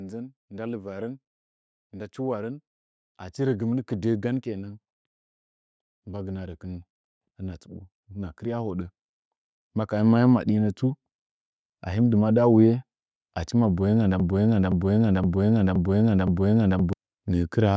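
From 0.49 to 4.79 s and again from 5.91 to 10.84 s, automatic gain rising lifts voice and background together by about 7 dB, a slow swell rather than a sudden jump. Just after "achi maboyenga nda", from 14.20 to 16.93 s, a broken-record loop repeats an identical 0.52 s fragment five times back to back. That is likely a stalled stream resending its last buffer, and unlike a stutter, the missing speech never resumes where it left off.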